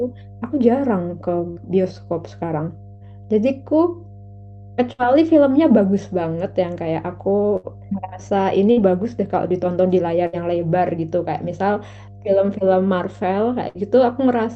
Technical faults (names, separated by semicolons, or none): mains hum; burst of packet loss